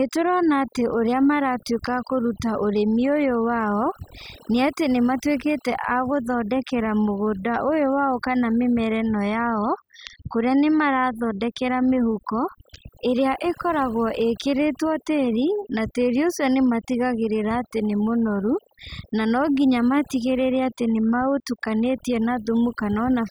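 Speech, with overdone noise removal running through the whole clip. A noise reduction stage was set too hard on a noisy source. Any frequency band near its noise estimate gets pulled down or shut off. The quieter parts of the voice go too. The background drops and breaks up into twinkling specks where bands flicker on and off.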